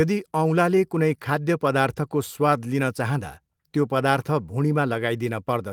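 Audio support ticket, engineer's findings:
No faults found in the speech; the Opus voice coding path runs at about 24 kbps in hybrid mode with full bandwidth.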